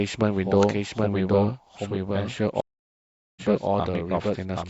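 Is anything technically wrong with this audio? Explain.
Yes. Throughout, the speech is shadowed by a clean second copy about 0.7 s behind and about 5 dB quieter, with no room colour: a doubled audio track, likely from the same source captured again through a slower path. From 2.60 s to 3.42 s a stream reconnect occurs. The sound drops to 0.76 s of silence and then resumes roughly half a second further on, because the connection broke and the player restarted a fresh decoder mid-stream.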